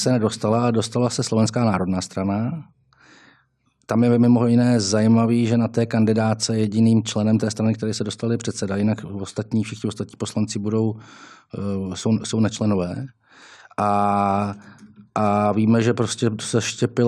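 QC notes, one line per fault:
No faults heard.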